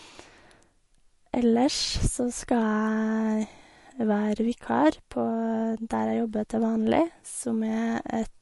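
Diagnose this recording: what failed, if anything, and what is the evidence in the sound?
The damage is at the codec stage and runs through the whole speech clip. Nothing comes through above about 11.3 kHz, a hard treble ceiling that sounds like an encoder trimming the top end to save bits. Beneath that, the codec damage is plainly audible, with weak frequency components flickering in and out from frame to frame. That points most likely to MP3 compression squeezed to a low bitrate, something around 48 kbps.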